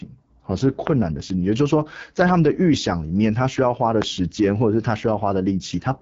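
From start to finish the speech carries AMR wideband (HD Voice) codec damage. Voices sound rough and raspy, as expected at one of its lowest rates, around 8.85 kbit/s. The top band is synthetic noise, and a spectrogram shows a hard ceiling with nothing above 7.6 kHz.

At 4.02 s a single loud pop cuts in, roughly 15 dB above the speech, which continues underneath. On a waveform it is a tall, narrow spike; on a spectrogram, a thin vertical stripe across all frequencies. The likely cause is a brief voltage jolt, such as a plug or switch transient.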